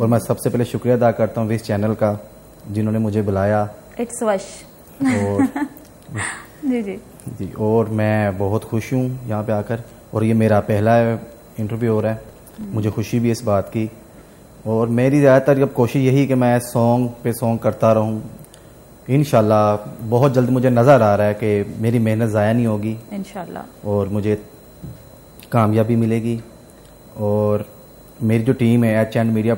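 From 12.0 s to 12.93 s there is a burst of processor overload crackle. For just under a second the processing fails to deliver a run of short buffers on time, around 5 ms each, with about ten deadlines missed. Each miss replays a fragment of stale audio whose edges do not join the surrounding signal, so the sound takes on a gritty, tearing crackle. It clears once the load drops after 12.93 s.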